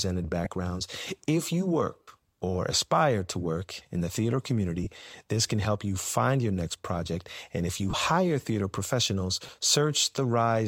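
Lost LE Audio frames: the Bluetooth link dropped short runs of LC3 frames, and the decoder filled each gap by repeating the last spectrum with randomised signs. The speech briefly becomes a noisy smear at 0.45 s, 2.03 s (just before "or aspire to work"), 4.83 s, 7.90 s (between "if you" and "hire theater professionals") and 9.46 s. Each gap lasts between 15 and 53 ms.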